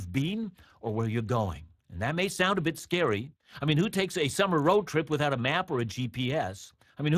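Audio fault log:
throughout, Speex codec: the speech carries a plainly audible hoarse, grainy roughness, because this CELP coder rebuilds each voice frame from a predicted spectral envelope plus a coarsely coded excitation, and the excitation has too few bits to be clean. The roughness, which fits a bitrate around 22 kbps, clings to the voice itself rather than swirling or warbling in the highs as a transform codec would. The spectrum stops near 15.4 kHz.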